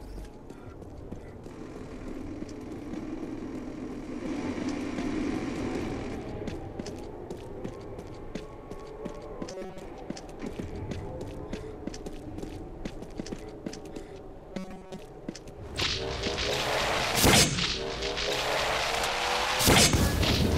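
Robotic sound from repeated short buffers occurs at 9.52 to 9.85 s and 14.52 to 14.99 s: the audio becomes a rigid metallic buzz at 188 Hz. This likely comes from a roughly 5 ms buffer being replayed for most of each stretch while fresh audio was skipped.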